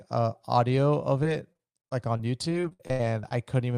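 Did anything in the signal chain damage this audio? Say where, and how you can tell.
Yes, the damage is at the network stage: repeated packet loss (robotic sound) from 1.23 s to 3.33 s, starting right after "uh audio of". Over that stretch the audio breaks into about fourteen short holes, the longest about 76 ms. Each hole is papered over by extending the preceding sound, which gives a choppy texture with pieces missing. Roughly a fifth of the span is concealed, about 0.37 s in total.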